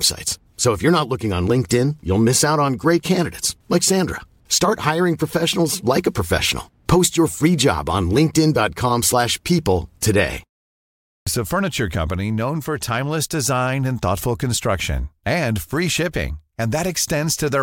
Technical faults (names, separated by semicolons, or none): clipped start after a pause